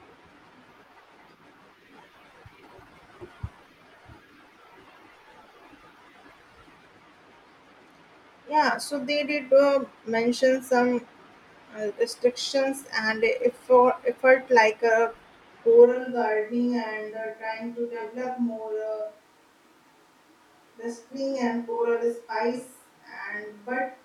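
From 15.87 s to the end, a switch to a distant microphone, likely after the close mic failed: speech turns instantly roomy, thinner and about 5 dB quieter with faint room noise, rather than gradually reverberant.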